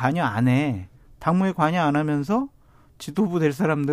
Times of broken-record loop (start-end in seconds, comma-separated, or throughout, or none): none